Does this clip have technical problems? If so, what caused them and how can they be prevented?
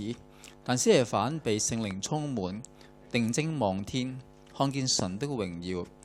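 Yes: loud pops, a double pop at 1.91 to 2.08 s and a single one at 4.99 to 5.02 s, peaking well above the sound (about 10 and 15 dB). These are likely caused by voltage spikes from a plug, switch or static. Unlike dropouts, the sound continues underneath. Prevent them by securing connectors and muting before switching.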